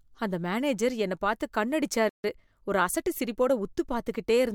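At 2.09 s, just after "மேனேஜர் என்னப் பாத்து கண்ணு", the player likely ran dry of data or had its thread blocked, causing a playback stall: the speech cuts out mid-flow into silence for about 148 ms, resuming at 2.24 s.

From 2.24 to 3.72 s the player works off that backlog by snipping out short slices and cross-fading across the joins, a time-compressed catch-up running at 1.1 times normal speed. The speech sounds hurried yet keeps its pitch.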